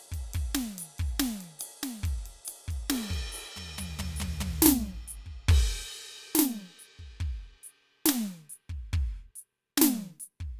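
Nothing goes wrong anywhere in this music clip, so there's no technical fault to point out.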